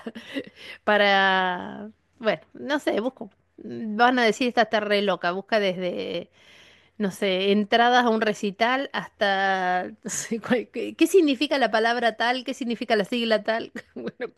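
No technical faults are audible.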